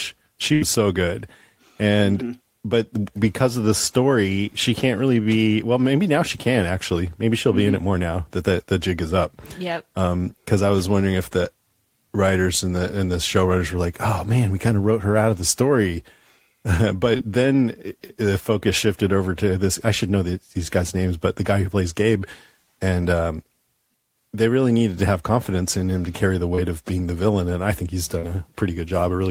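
It's a speech recording with two dropout problems. Right at the start, from about 0.53 to 0.63 s, there's a burst of packet loss: roughly 80 ms of audio never arrived, and the receiver papered over it by stretching the last bit of sound for about 76 ms and fading it down. You hear a held buzz or hiss that dies away, then the speech picks up a little further along with that stretch gone. The second one is smaller, a short concealed packet loss at about 17.17 to 17.21 s. Only around 20 ms went missing, and the decoder patched it by carrying the previous sound forward and blending back into the real audio. It comes across as a quick smear or wobble, and a brief consonant in that spot can get swallowed.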